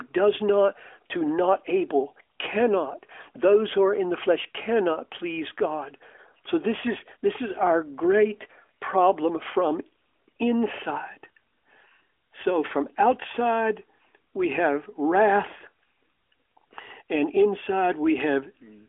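No technical faults are audible.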